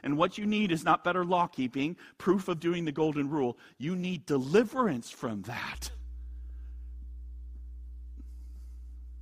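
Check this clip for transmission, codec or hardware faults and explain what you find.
One hardware fault: mains hum. From 5.75 s to 9.22 s, right after "need deliverance from", a ground loop or nearby transformer couples the 60 Hz power line into the signal, adding a steady low drone roughly 15 dB beneath the speech.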